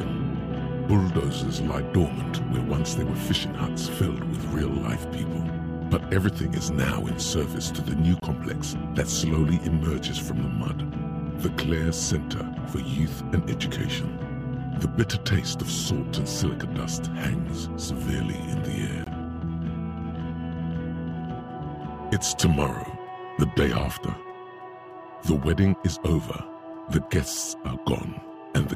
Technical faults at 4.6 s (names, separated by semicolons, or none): none